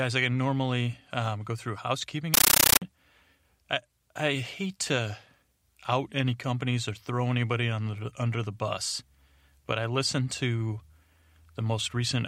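At 2.34 s, just after "um go through housekeeping", loud chattering static replaces the speech until 2.82 s. This is a compressed stream played as audio. A 640 kbps AC-3 bitstream reached the output undecoded. Each 13.3 ms noise burst and its silent padding repeat 31.25 times a second.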